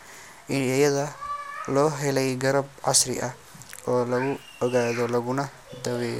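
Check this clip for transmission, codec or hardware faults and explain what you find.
No faults detected.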